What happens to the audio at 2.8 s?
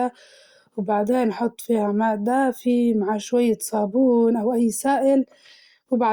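Nothing goes wrong at 2.8 s; the speech carries straight through that moment with no dropout, glitch or distortion.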